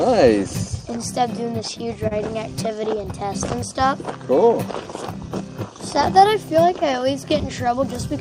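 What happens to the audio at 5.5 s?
Nothing goes wrong at 5.5 s; the audio carries on intact through that moment.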